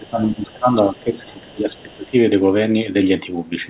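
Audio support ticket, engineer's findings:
Speech suppressed in double talk, 0.0–2.14 s. Likely the echo canceller failing to separate near talker from loudspeaker echo during overlap and attenuating both. Near voice dips by up to about 20 dB, pumping and thinning for roughly two seconds.

Other side's voice leaking through at 0.04–0.08 s and 1.75–2.05 s. Residual far-end signal likely passed by incomplete echo cancellation at the microphone. Faint second voice, about 35 dB then about 30 dB under the talker, in short scraps band-limited to 4 kHz.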